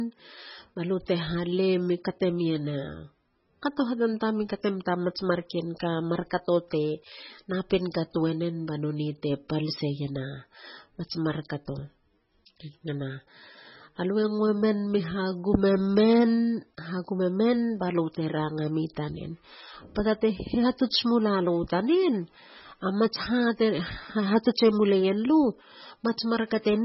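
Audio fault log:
Throughout: MP3 compression. The speech has nothing above 5.6 kHz, so it sounds dull and boxed in. Weak detail flickers in and out, giving a watery, swirling texture. S sounds turn metallic and chirpy, and consonant attacks smear. The damage is heavy. This is likely a low-bitrate MP3 encode, one that fits about 16 kbps. Short of bits, the encoder cut the treble at a fixed point and dropped quiet frequency lines frame by frame.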